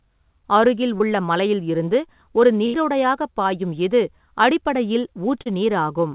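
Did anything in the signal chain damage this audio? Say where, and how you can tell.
Yes. Short concealed packet loss occurs at 0.98 to 1.02 s and again at 5.42 to 5.48 s, a network-stage fault. About 20 ms of audio is missing at the first point and 40 ms at the second, and the receiver patched each hole by extending the preceding sound, 17 ms and 38 ms of synthetic fill respectively, before crossfading back to real audio. You hear a brief smear or wobble rather than silence.

A burst of packet loss at 2.66 to 2.76 s is also network damage, but larger. Roughly 80 ms of consecutive audio failed to arrive in time, and concealment stretched the last received sound across 79 ms while attenuating it. The result is a held, fading buzz or hiss, then the audio picks up further along with that stretch simply gone. Throughout, the call's narrowband codec leaves nothing above 4 kHz, consistent with G.711.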